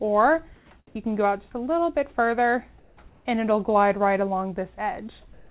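Discontinuous transmission likely stopped the sender during quiet gaps, so comfort noise in place of the background fills 0.56–0.70 s, 0.87–0.95 s, 2.79–2.97 s and 5.33–5.50 s. There, the quiet background, about 30 dB below the loud parts, becomes steady, featureless hiss within about 1 dB of its level, all band-limited below 4 kHz by the narrowband call codec.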